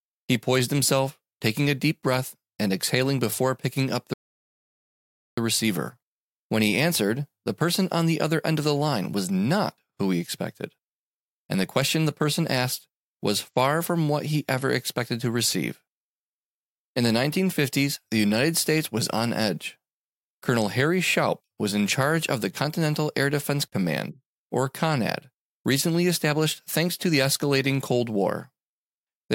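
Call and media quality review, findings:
Rebuffering stall at 4.14 to 5.38 s. Speech cuts to silence for about 1.24 s, then resumes exactly where it stopped. No content lost, no skip, no repeat. Only time added. Probable component: player buffer. Playback drained the downloaded audio faster than new data arrived, so the player halted until the buffer refilled. Points to a network throughput dip, not a decode fault.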